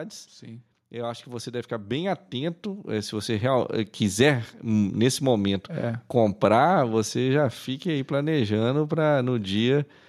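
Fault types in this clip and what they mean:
Automatic gain rising: the automatic gain control judged the incoming level too low and stepped its gain upward over a span of seconds rather than all at once, lifting the level by about 12 dB between 0.44 and 4.01 s. Because the whole signal is amplified, the speech and the background noise beneath it swell together, so the voice grows steadily louder while the room noise climbs right alongside it.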